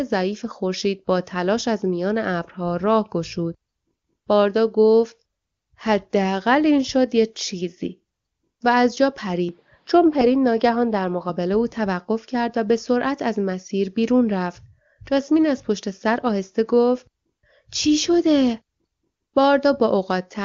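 At about 9.49 s the speech suddenly goes dull and a bit boxy, with nothing above 5.5 kHz, and there's a faint new background hiss, roughly 45 dB under the voice. There's no gap at the change and the level holds about steady. At 11.30 s it clears up again. That points to an input switched to a poorer device, likely a narrower-band mic briefly taking over, while the HD Voice wideband coding stays clean throughout.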